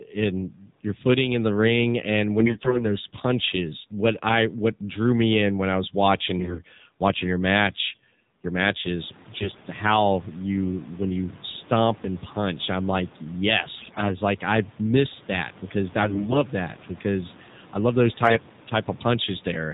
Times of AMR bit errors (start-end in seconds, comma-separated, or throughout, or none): 2.40-2.85, 6.38-6.62, 9.34-9.60, 13.78-14.04, 16.02-16.39, 18.24-18.39